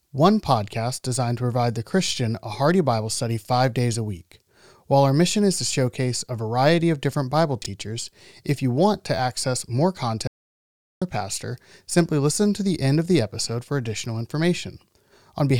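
At 7.62 s there's a brief chunks out of order glitch: a 20 ms slice of the speech landed one chunk late, so it plays after the slice that should follow it, giving a tiny jumbled moment. Then from 10.27 to 11.02 s you get an audio dropout to silence, about 0.74 s of dead silence with no room tone. The input most likely dropped while recording carried on.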